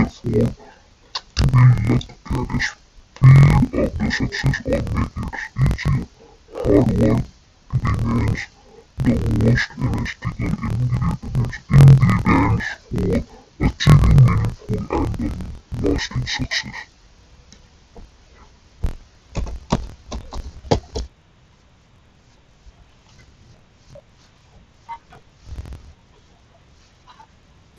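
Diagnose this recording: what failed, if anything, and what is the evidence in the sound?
The failure is at the sample-format conversion stage, where interleaved audio is being read as planar across the whole speech clip. Each 24 ms block gets split, so the voice plays an octave low and doubled, with a choppy flutter at about 41.7 Hz from the block boundaries.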